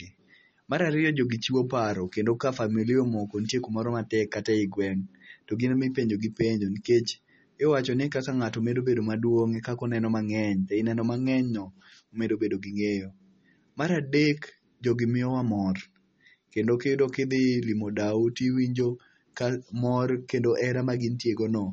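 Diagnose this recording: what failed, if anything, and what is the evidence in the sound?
Codec stage, likely MP3 compression: watery speech throughout; a spectrogram shows a hard ceiling at 8.3 kHz and flickering holes, fitting a bitrate near 32 kbps.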